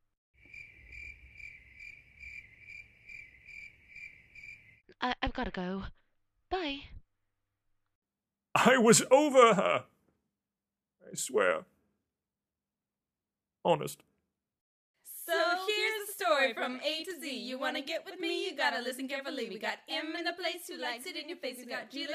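No technical faults can be heard anywhere in the signal.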